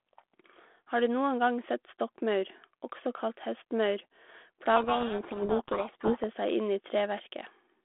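From 4.76 s to 6.25 s the speech is buried in harsh, grinding distortion: a codec payload misread, where the receiving end unpacks each G.726 code word with its bits in the wrong order, so every sample difference is rebuilt from scrambled values. Unlike the light coding damage of the 32 kbit/s G.726 link heard around it, limited to roughly 250 Hz to 3.5 kHz, this damage buries the speech and lasts until the packing agrees again.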